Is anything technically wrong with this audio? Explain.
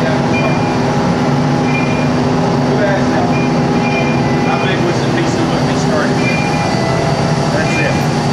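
Yes. Damaged data in a compressed stream produces three short glitches, at 0.33 s, 3.32 s and 7.90 s. At each point corrupted data makes the decoder misread a frame and lose sync until it finds the next valid frame header. The result is a brief glitch about 14 ms long, heard as a chirp, squawk, click or short hole.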